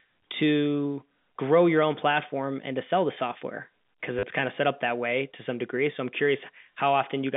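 At 4.19 s, just before "kind of set up", packet loss with last packet repeated fills 40 ms. The re-played chunks make a brief robotic stutter over the narrow telephone band.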